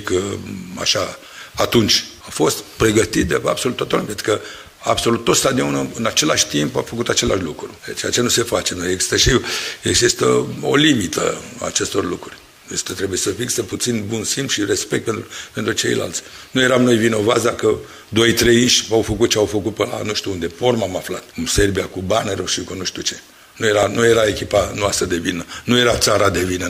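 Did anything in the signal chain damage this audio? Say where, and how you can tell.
Yes. Two sharp clicks at 1.60 s and 23.83 s point to dropped samples, likely from a driver or buffer hiccup losing under a millisecond each time. The waveform jumps abruptly between non-adjacent values, and a spectrogram shows a thin vertical line spanning all frequencies.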